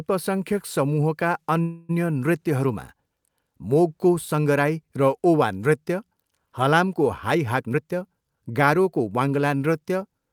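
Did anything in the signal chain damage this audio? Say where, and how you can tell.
Yes. A call audio freeze runs from 1.61 to 1.91 s, at the network and jitter buffer stage. The sound is held as a fading buzz for about 275 ms, likely because delayed packets starved the buffer, then resumes where it stopped, so nothing is lost and the audio now runs 275 ms later.

A jitter buffer speed-up follows "हलामको हाइ", from 7.63 to 9.35 s. The speech plays at 116% speed with unchanged pitch and sounds hurried, because the receiver cut roughly 0.3 s of pitch-period slices to shrink an overfilled buffer.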